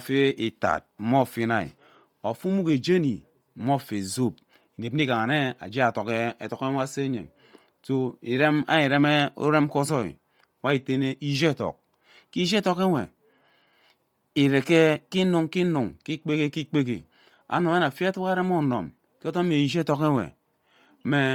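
From start to finish the speech carries heavy coding damage, a grainy, breathy edge on every syllable, with the top end thinned out and replaced by hiss. That's likely Bluetooth LC3 compression at a low rate, consistent with roughly 32 kbps in 10 ms frames, where the upper spectrum gets zeroed and noise-filled.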